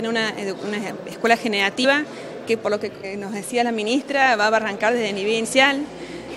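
From 0.88 to 1.61 s a galloping pattern of short 217 Hz buzzes, roughly 15 dB below the audio, sits underneath: GSM signalling bursts from a nearby phone being rectified by the audio circuit. At 1.83, 3.03 and 5.44 s the audio jumps forward. These are compressed frames skipped, with jumps of roughly 70 ms and 100 ms that fit three or four lost 21.3 ms frames.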